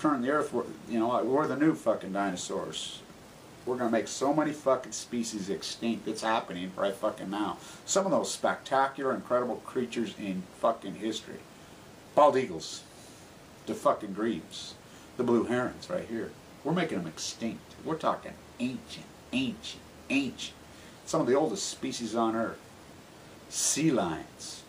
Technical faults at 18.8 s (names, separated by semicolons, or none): none